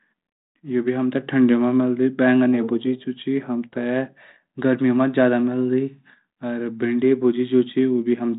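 No technical faults can be heard in this speech. It passes through G.726 ADPCM at 32 kbit/s, which holds everything below 4 kHz with only a light trace of coding noise.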